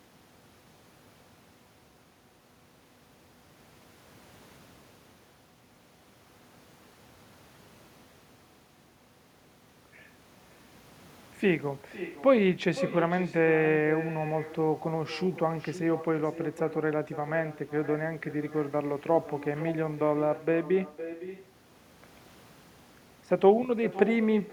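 Speech carrying an echo with no canceller throughout: every phrase returns about half a second later, about 13 dB quieter and thinner, as the far loudspeaker feeds the microphone. On a spectrogram, each syllable's pattern repeats faintly, offset; the waveform shows trailing ghost bursts.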